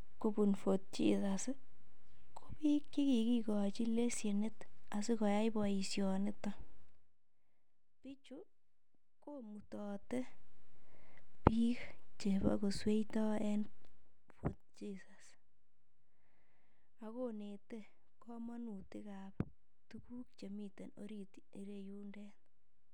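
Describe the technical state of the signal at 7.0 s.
Zipper noise runs from 6.79 to 7.15 s, so 7.0 s falls in the middle of it. Across this span the speech level drops by roughly 20 dB, but in discrete steps of about 1 dB each, around a hundred per second, with no smoothing between them. Every step puts a tiny discontinuity into the waveform, and together these small clicks form a rapid ticking, zipping texture riding on the speech as the level falls.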